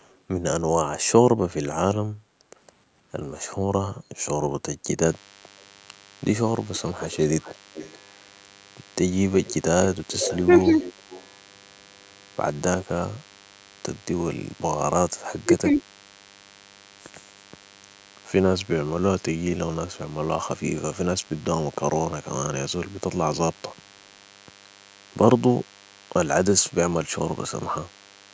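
From 5.06 s to the end of the clip, a DECT cordless phone buzz sits under the speech: a thin, steady 100 Hz tone with a dense ladder of harmonics, around 25 dB below the talker. It comes from a DECT handset or base station nearby whose radio bursts, repeating every 10 ms, are being rectified in the audio circuitry, so the burst rate turns into an audible buzz that never lets up.

Between 6.75 and 7.99 s, and again from 9.45 to 11.25 s, a delayed copy of the speech trails the original by about 424 ms. This is an echo leak, likely from a far end playing the call on a loudspeaker where the echo canceller failed to remove everything its microphone picked up. The first stretch is faint, about 25 dB down. The second is much more obvious at about 15 dB down.

In the middle of that second echo stretch, between 10.46 and 10.74 s, the speech dips briefly by about 5 dB, affecting only around 70 ms in total. 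A far deeper cut follows from 15.44 to 15.79 s, where the speech drops by roughly 25 dB across about 300 ms. Both are speech suppressed in double talk: the echo canceller, likely faced with both sides talking at once, could not separate the local talker from the loudspeaker echo and attenuated everything.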